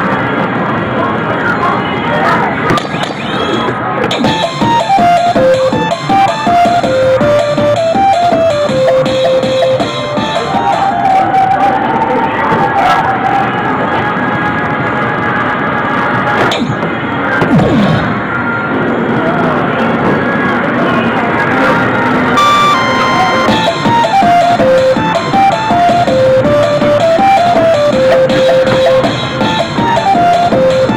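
Hard clipping runs throughout, driven about 13 dB past the ceiling, so roughly a tenth of samples are flattened: harsh fuzz on every loud moment, unlike soft saturation's rounded warmth.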